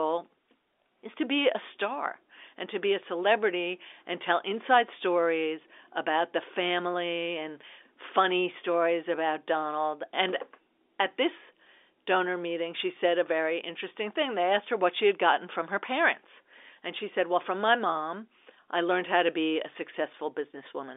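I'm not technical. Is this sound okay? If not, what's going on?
Yes, there's nothing wrong with this sound.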